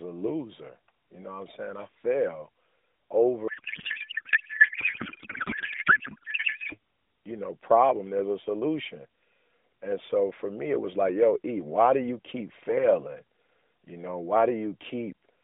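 A codec payload misread runs from 3.48 to 6.76 s. The receiver unpacks octet-aligned AMR frames as if they were bandwidth-efficient, so every field lands in the wrong place and the speech gives way to garbled noise and warble that barely tracks it. This happens inside an AMR narrowband mobile codec channel with a band of about 200 Hz to 3.7 kHz, whose light coding damage fits its 12.2 kbps mode.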